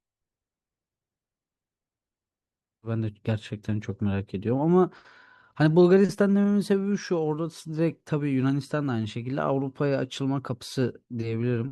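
At 2.82 to 2.88 s the speech jumps abruptly ahead with a brief blip: a stream segment skipped, likely one that failed to load.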